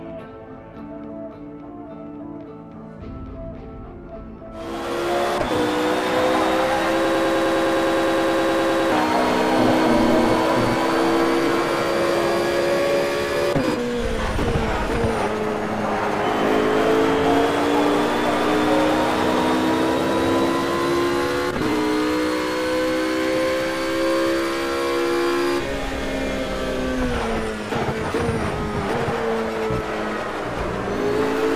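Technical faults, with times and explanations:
7.05 to 8.92 s, broken-record loop: a fragment of about 103 ms plays 18 times back to back, each repeat identical, so the sound locks into a rapid repeating cycle for nearly two seconds before moving on, and whatever should have played there never arrives. This likely comes from a stalled player, encoder or stream resending its last held buffer. Exact repetition with no decay sets it apart from an echo, and the lack of any gap sets it apart from a dropout.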